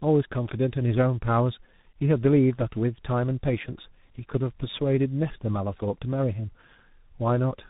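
From start to finish, the speech shows tandem speech coding. It sounds rough, muffled and warbly in the way of a low-rate G.723.1 stage, likely followed by G.726 at 32 kbit/s, with a G.711 A-law link between them. Each coder re-encodes the previous one's errors, so the damage compounds. A spectrogram shows a hard ceiling near 3.8 kHz with nothing above, and smeared, blotchy harmonics. The waveform looks grainier than clean speech.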